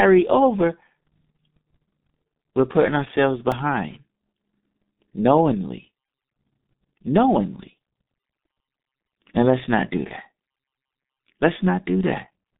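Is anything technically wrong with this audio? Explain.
Yes. There are two faults.

The whole clip carries the G.723.1 codec. This is a low-rate telephony coder working in 30 ms frames, and the sound fits its 6.3 kbit/s mode. It keeps only a narrow line band of about 150 Hz to 3.7 kHz. Nothing is heard above 3.8 kHz. Its speech model updates slowly, so detail is smeared between frames. The damage is heavy. The speech sounds muffled and hoarse, and consonants are blurred.

There is a repeated buffer at 3.52 s, just after "we're putting ourselves". New audio did not arrive in time, so the player played the last buffer again. Each repeat lasts about 1.45 ms, which fits a 64-sample buffer. That piece plays two extra times, with a hard join at each repeat. A few milliseconds of real audio are lost. Because the buffer is so small, this is heard as a click or a brief buzz.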